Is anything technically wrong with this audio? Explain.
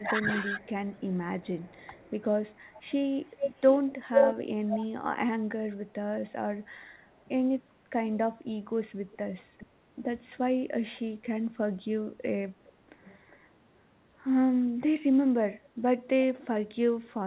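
Yes. Two call faults can be heard: the speech is pushed down while both ends talk, and an echo of the voice leaks back.

Speech suppressed in double talk occurs three times: from 0.0 to 0.61 s, where the voice dips by roughly 15 dB for about half a second; between 4.97 and 7.12 s, where brief cuts of about 30 dB add up to only around 150 ms; and from 15.11 to 16.24 s, with drops near 25 dB totalling about 0.4 s. The likely cause is an echo canceller that could not tell the near talker from loudspeaker echo while the far side spoke, so it attenuated everything. The voice ducks or drops out in pieces rather than fading evenly. Unlike a network dropout, these gaps line up with the other side talking.

Echo leak runs from 0.6 to 15.69 s. A second copy of the voice trails the original by about 407 ms, only about 5 dB below it, so it is clearly audible as a distinct repeat rather than room reverberation. 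A repeat that long and that discrete likely comes from a loudspeaker-side echo canceller letting its microphone pickup through and sending it back. This separates it from reverb, which smears continuously instead of repeating.

The audio is band-limited at 4 kHz, which fits the narrowband G.711 mu-law codec on the call path.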